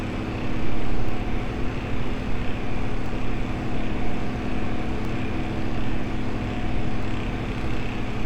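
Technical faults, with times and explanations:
1.09, 3.06, 4.05, 5.05, 6.04 and 7.03 s, overlap between stream segments: six tiny clicks or skips fall close to one-second intervals, matching 1-second segment boundaries. At each join, the time stamps of neighbouring segments overlapped, and the player cut that overlap out of sound that was never actually duplicated. Between 5 and 15 ms of audio disappears each time, so the waveform jumps abruptly and is heard as a tiny skip.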